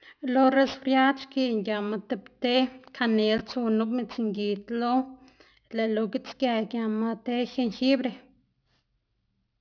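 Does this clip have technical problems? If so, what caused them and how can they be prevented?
Yes. Aliasing runs through the whole clip. The speech was resampled down without a proper anti-aliasing filter, so content above the new band edge at 5.5 kHz folded back into lower, unrelated frequencies, which fits a drop to an 11 kHz sample rate. The folded energy sits roughly 25 dB below the speech, enough to make sibilants gritty and metallic while the spectrum runs hard up to 5.5 kHz. To prevent it, low-pass filter below half the target rate before downsampling, or use a resampler that does this automatically.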